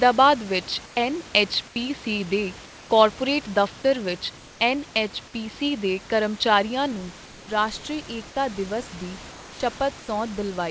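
From 0 to 6.92 s the sound is dull and band-limited, likely from an input switched to a poorer device. The spectrogram shows a hard ceiling at 5.6 kHz that rises to 8 kHz at the switch, with a level step of roughly 5 dB.

Comfort noise replaces the background in gaps at 0.86, 1.68, 2.66, 4.38, 7.26, 9.32 and 10.0 s, each lasting 80 to 280 ms. The likely cause is discontinuous transmission. These gaps appear as smooth, featureless noise about 2 to 4 dB quieter, flat in the waveform.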